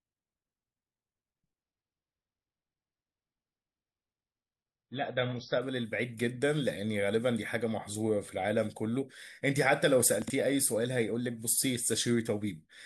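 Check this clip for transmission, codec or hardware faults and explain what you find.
One fault turns up, near the end of the speech. From 10.22 to 10.3 s the chunks play out of order: a 20 ms chunk arrived three chunks late and plays after its successors. The moment sounds jumbled, and the waveform shows three hard discontinuities, seen as thin vertical lines on a spectrogram.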